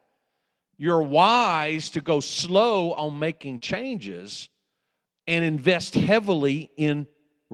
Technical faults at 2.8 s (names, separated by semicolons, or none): lost packet rebuilt from error correction